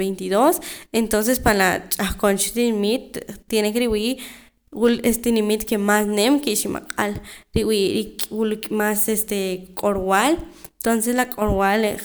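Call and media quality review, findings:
No audible faults found in the speech; nothing to action.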